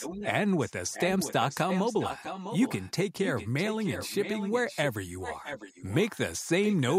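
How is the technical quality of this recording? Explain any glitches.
The recording is marred by echo leak running through nearly the whole clip, at 0.00–0.33, 0.61–0.72, 0.92–1.33, 1.49–2.91, 3.23–4.84, 5.21–5.95, 6.15 and 6.64–6.98 s. A copy of the speech returns about 0.65 s late, mostly around 10 dB under the direct speech and much fainter at 0.61 s and 6.15 s. This is likely a far-end loudspeaker being picked up by its microphone, with the echo canceller failing to remove it.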